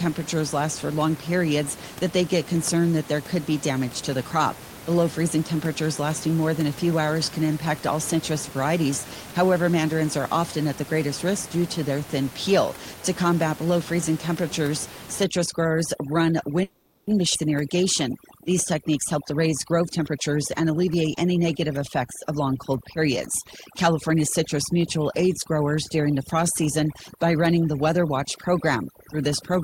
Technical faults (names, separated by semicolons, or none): overdone noise removal; call audio freeze; skip ahead; jitter buffer speed-up